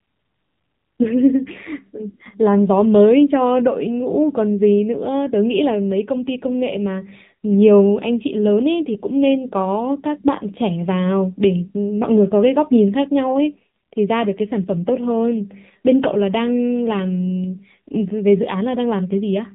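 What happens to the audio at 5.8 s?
At 5.8 s the speech carries the AMR narrowband mobile codec damage present throughout the clip. Nothing above 3.8 kHz survives, and the vocal-tract model, driven by sparse pulses in each 5 ms, sounds plainly buzzy and synthetic, consistent with roughly 7.4 kbps.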